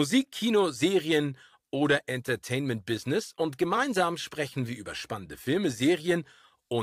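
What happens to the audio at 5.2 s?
Nothing goes wrong at 5.2 s; the speech carries on intact through that moment with no dropout, click or distortion.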